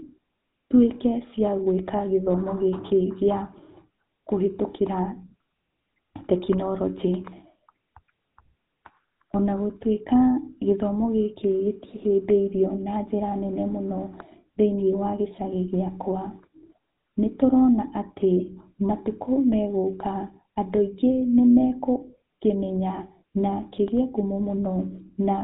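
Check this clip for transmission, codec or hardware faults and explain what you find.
One fault runs through the whole clip: GSM full-rate codec damage. The speech was squeezed through the original GSM full-rate coder, which fits a 13 kbps stream. It rebuilds the voice from a coarse, regularly pulsed excitation and cuts everything above 3.8 kHz, leaving a plainly audible buzzy, gravelly roughness and a muffled top end.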